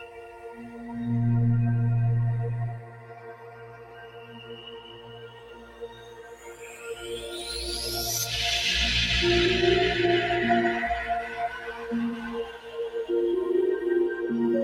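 The sound pumps and thins throughout, with sustained parts and decaying tails repeatedly sinking while sharp onsets push through intact. The level swings by something like 15 dB as the processing clamps down and releases. That is the signature of a noise suppressor applied to music or sounds: a speech-oriented suppressor was left active, and it treats steady tones, ambience and reverberant tails as noise to be removed, so anything held or fading gets pulled down. The sound cut by the noise suppressor is heaviest in four stretches. From 0.00 to 0.92 s, the level drops by about 12 dB. The longest cut runs from 2.75 to 7.30 s and also goes about 12 dB deep. From 11.26 to 11.90 s, the dip is milder, about 7 dB. From 12.44 to 12.78 s, it reaches about 11 dB. In each of these spans the suppressor judged the steady material to be noise and attenuated it more than the surrounding audio.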